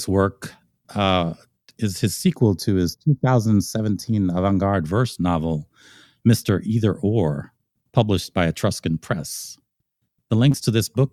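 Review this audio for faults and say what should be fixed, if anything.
From 2.36 to 4.73 s the sound turns hollow and phasey, thinner in the upper range than the surrounding audio. This is channel delay causing comb filtering. One channel runs a fraction of a millisecond behind the other, and when the two are summed to mono, everything they share cancels at evenly spaced frequencies. The first notch falls at roughly 3 kHz. Aligning the channels before the mono fold-down, or taking a single channel, would prevent it.

Between 10.51 and 10.56 s there is a brief smear, a small wobble where the sound should be clean. This is short concealed packet loss. About 20 ms of audio never reached the decoder in time, so the receiver synthesised around 22 ms by extending the preceding sound and then crossfaded back into the real signal. A larger jitter buffer or a more reliable network path would prevent it.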